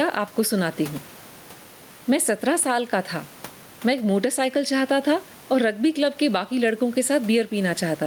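Gain pumping runs through the whole speech clip: the room noise, about 31 dB below the speech, swells up in each pause and ducks by roughly 10 dB under every loud syllable, likely from gain set too high with a fast limiter clamping it. Unlike a noise gate, the background never drops to silence.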